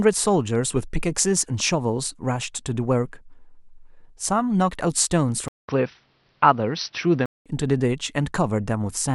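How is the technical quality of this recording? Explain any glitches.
There's one clear glitch. From 5.48 to 7.46 s, the speech goes dull and boxy, with nothing above 5.9 kHz and a 200 ms gap right at the switch. That points to the input likely being switched to a poorer device, another mic or a headset call profile with a narrower band. Loudness stays about the same, but a faint new background noise sits well below the voice until the fuller sound returns at 7.46 s.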